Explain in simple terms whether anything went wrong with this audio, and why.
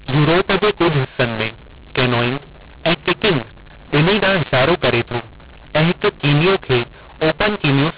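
The speech sounds harsh and gritty from start to finish. Levels are scrambled, with some parts coming out too loud and others too quiet, and the pauses between phrases are filled with a hiss instead of silence. This is a mu-law and A-law mix-up. The telephone audio was stored using the A-law scale but played back as if it used mu-law, so every level is translated wrongly and even near-silence comes out as noise.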